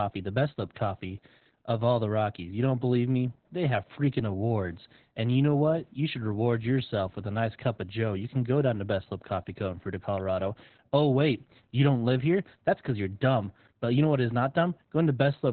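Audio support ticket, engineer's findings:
Opus voice compression, whole clip. Speech muffled and hoarse with a slight robotic edge, nothing above about 4 kHz, so it's narrowband. Points to the SILK coder squeezed hard, which fits roughly 8 kbps. Linear prediction keeps the rough vocal shape, but the excitation is coded so coarsely that detail and breathiness get smeared. Damage is heavy throughout.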